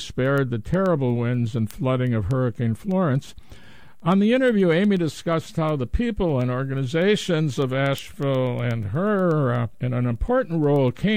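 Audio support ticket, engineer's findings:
Word clock ticks, 0.14 s to 11.12 s, roughly ten per second, around a hundred in all, sharp and uneven in strength. Receiver is free-running, not locked to the source clock over the digital link. Offset is about 200 ppm. Each slip drops or repeats a single sample. Spectrogram shows evenly spaced thin vertical broadband lines. Waveform shows one-sample steps or spikes at the same spacing. Fix: slave the receiver to the incoming clock.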